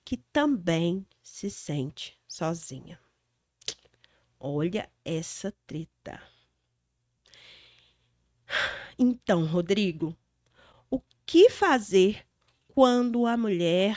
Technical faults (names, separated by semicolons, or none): none